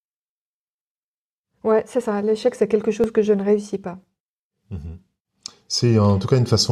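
Overlap between stream segments breaks this French speech clip at 2.05 s after "ouais c'est", at 3.04 s between "c'est quelque" and "que je ne réussis", and at 4.04 s after "je ne réussis pas". Overlapping one-second segments get trimmed, removing about 4 to 17 milliseconds and leaving tiny skips about once per second.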